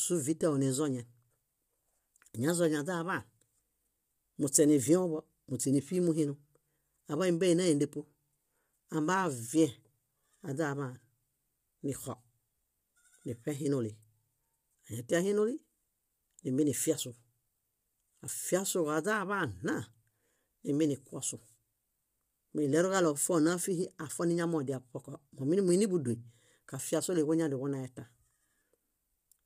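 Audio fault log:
Throughout: low-delay AAC compression. The speech sounds rough and grainy, with noise filling the gaps between harmonics and nothing above 15.7 kHz. This is likely AAC-ELD coding, whose short frames blur pitch detail, at a rate that fits roughly 32 kbps.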